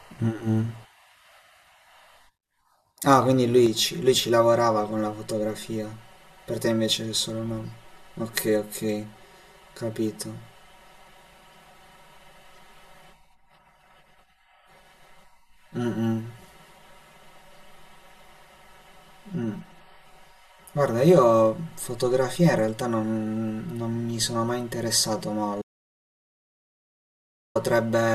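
From 3.66 s to the end, the speech turns hollow and phasey: a channel delay (comb filtering). One channel runs about 5 ms late and, summed to mono, cancels at evenly spaced frequencies from around 100 Hz upward. Unlike reverb or EQ, the notches stay fixed.

At 25.62 s the audio drops out to silence for 1.94 s, returning at 27.55 s. This was likely lost input while recording continued. Unlike gating or packet loss concealment, the gap is plain silence with no room tone or smearing.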